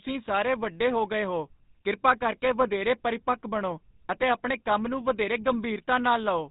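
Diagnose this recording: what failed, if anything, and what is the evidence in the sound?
The damage is at the codec stage, and it's the GSM full-rate codec all the way through the speech. You can hear the telltale buzzy, gravelly grit on the voice, and nothing above 4 kHz makes it through, so it's dull and boxy too. That's a vocal-tract model fed by a coarse pulse train, keeping only every third excitation sample, which fits the 13 kbps full-rate mode. The damage is plainly audible.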